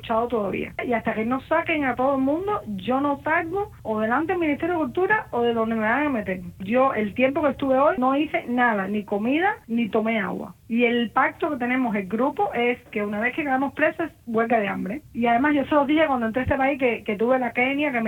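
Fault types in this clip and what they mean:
No technical faults were detected in this recording.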